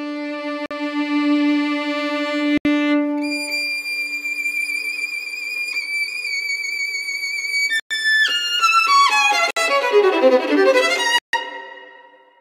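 The audio drops to silence five times and then carries on: at 0.66 s for 47 ms, 2.58 s for 75 ms, 7.80 s for 110 ms, 9.51 s for 59 ms and 11.18 s for 148 ms, the longest gap. These are likely Bluetooth stalls, where interference delays packets until the headphones' buffer empties, so playback halts until the retransmitted data arrives and resumes either where it left off or a little further on.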